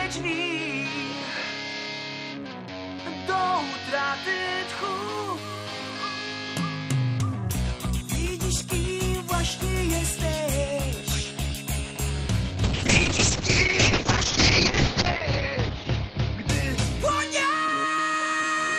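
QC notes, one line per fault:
12.65–18.05 s, call bitrate drop: the bandwidth estimate collapsed and the encoder was starved of bits, consistent with about 96 kbps falling to near 7 kbps for 2.58 s at worst. Coarser coding roughens the sound, and the audio band shrinks from 20 kHz to 8 kHz, muffling it.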